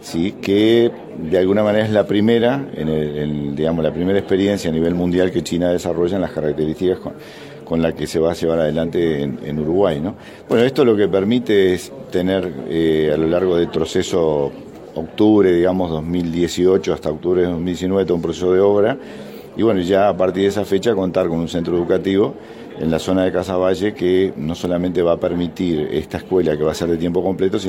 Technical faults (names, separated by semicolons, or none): bit error spike